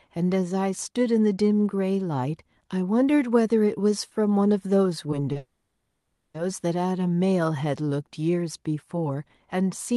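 At 5.32 s a sound is briefly held, with a faint buzz or dip: a short stall from a late packet, where the jitter buffer ran dry and about 30 ms was stretched before the audio resumed. From 5.37 to 6.36 s comes a call audio freeze. The last sound drags on as a fading buzz or hiss, then goes silent for about a quarter second before speech resumes where it stopped. This was likely caused by delayed packets emptying the jitter buffer, adding nearly a second of delay.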